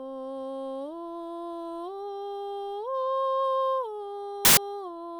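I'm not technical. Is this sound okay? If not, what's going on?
No. Near the end of this music, from 4.45 to 4.57 seconds, there is a short burst of loud hiss. This is samples built from the wrong bytes. The player misreads how each tiny piece of sound is stored, so the music turns into noise.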